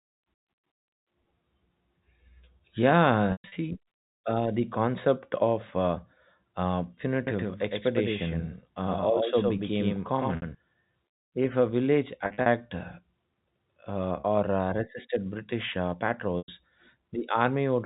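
At 3.32 to 3.52 s, packet loss with pitch repetition sets in. About 160 ms goes missing across 200 ms, with the longest gap 120 ms. The receiver repeats the last pitch period to fill the holes, so the sound holds briefly with a buzzy, frozen tone.

From 7.27 s, after "concept of uh uh", to 10.55 s, a doubled audio track appears. A second, full-band copy runs about a tenth of a second behind, a few decibels quieter. It has no room colour and starts and stops abruptly. A slower second capture path is the likely cause.

Packet loss with pitch repetition returns at 10.36 s, losing 60 ms. At 12.26 s, after "a village", 120 ms is lost in short runs. At 14.2 s, just before "or uh resisted", 40 ms is lost. At 16.38 s, 100 ms goes. The short runs bring a brief held buzz, while the 60 ms and 100 ms losses fade into silence before the speech returns.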